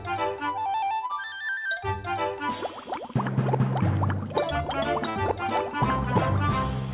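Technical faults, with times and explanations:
1.06–1.11 s, short concealed packet loss: about 40 ms of the stream never made it to the decoder in time, so the receiver stretched the preceding sound across roughly 32 ms and blended back in. You hear it as a quick smear or wobble.
5.10–5.17 s, burst of packet loss: a longer run, about 60 ms, went missing. The receiver held the last sound for around 57 ms, letting it buzz or hiss away as it faded, then jumped ahead with that stretch gone.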